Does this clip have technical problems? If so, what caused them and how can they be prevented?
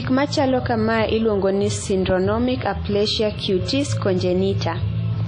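Yes. Throughout the speech there's a ringing, washy quality with hiss that swells and fades with the signal, and nothing above 10.1 kHz, which fits WMA compression at a low bitrate near 32 kbps. Encoding at a higher bitrate would likely prevent it.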